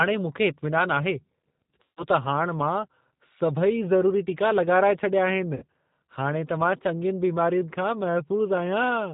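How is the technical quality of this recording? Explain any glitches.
The quality is limited by low-bitrate telephone coding, with two brief dropouts.

G.729 codec, throughout: the speech is rebuilt from a vocal tract filter, a pitch predictor and a few pulses per frame, with nothing above 4 kHz. The plainly audible rough, synthetic and band-limited sound fits a G.729-type coder at 8 kbit/s.

VoIP packet loss concealed by the speech codec, at 1.83 to 2.05 s and 5.56 to 5.64 s: about 140 ms and then 60 ms of audio went missing. The decoder extended its last pitch and filter at falling gain, so each gap turns into a fading buzzy or noisy smear, and the speech stays weak briefly afterward.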